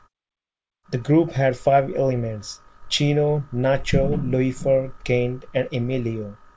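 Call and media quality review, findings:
No call or media quality findings to report for this speech clip.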